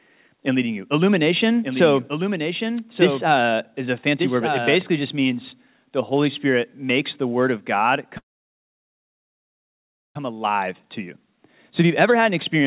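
From 1.63 to 4.75 s the speech carries a doubled audio track: a second full-band copy, about 5 dB quieter, trails roughly one second behind, dry and without room colour, switching in and out abruptly. The likely cause is a second capture through a slower path.

At 8.18 s a call audio freeze begins. The last sound is held only briefly, then about 1.94 s of silence follows until 10.17 s. The speech resumes where it stopped, so a 1.97 s gap was inserted and nothing is missing. This likely reflects delayed packets draining the jitter buffer.

From 10.41 to 12.64 s a jitter buffer speed-up follows as the receiver works off the added delay. It trims short pitch-period slices repeatedly, removing around 0.2 s in total. The speech runs at 109% speed at unchanged pitch and sounds hurried, still band-limited to 4 kHz by the G.711 call path.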